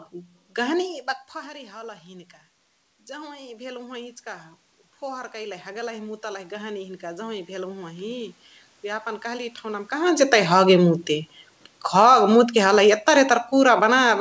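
From 1.32 to 10.73 s, automatic gain rising: the control raises its gain by about 11 dB after the level at the microphone drops about 17 dB, so voice and room noise swell together.

From 9.97 s to the end, automatic gain falling: the talker moves again, and the control lowers its gain gradually, so speech and background sink together toward the close.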